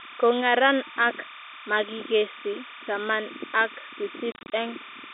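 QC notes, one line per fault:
Throughout: timecode bleed. A steady chirping warble sits roughly 15 dB below the speech, flipping between tones near 1 kHz and 2 kHz as linear timecode at 29.97 frames per second leaks in; a spectrogram shows two flickering bands, through the telephone-band speech.
4.32–4.52 s: packet loss filled with silence. About 130 ms of sound drops out in short holes scattered over 200 ms, the longest 30 ms, with hard edges; the waveform shows flat silent gaps, which fits roughly 10 ms packets.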